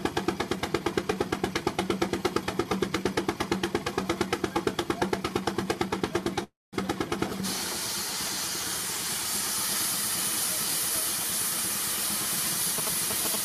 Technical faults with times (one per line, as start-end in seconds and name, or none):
6.43-6.75 call audio freeze
12.78-13.44 GSM signalling bursts